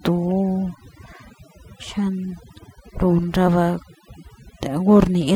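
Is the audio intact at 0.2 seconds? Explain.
No. At 0.2 seconds the speech is already affected by overdone noise removal, which runs through the whole clip. A noise reduction process was pushed too hard. It cuts individual frequency bands deep, or removes them, whenever they sit close to its noise estimate. Quiet parts of the voice fall below that line and vanish too. The background becomes near silence dotted with twinkling specks.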